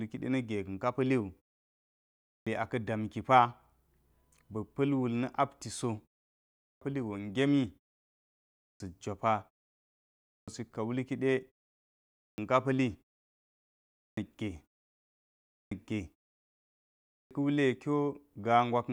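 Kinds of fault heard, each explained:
Clipped start after a pause: the playback device drops into a low-power state during silence and doesn't come back quickly enough, so the first half-second or so of each new phrase just vanishes. Here it happens eight times, after pauses of roughly 0.4 to 0.8 s, each time eating about 450 to 540 ms, for example right before "aka damki" near 2.0 s and before "pa̱li go" at 6.36 s, with the speech snapping in abruptly.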